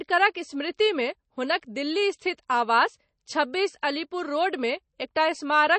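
From start to finish the speech has a hard ceiling at about 8.3 kHz, with nothing above it, and the damage is plainly audible: a watery, swirly texture where quiet detail flickers in and out. That's likely MP3 compression at a starved bitrate, something around 32 kbps. With that few bits, the encoder chops the treble at a fixed point and drops weaker frequency lines, which then pop on and off from frame to frame.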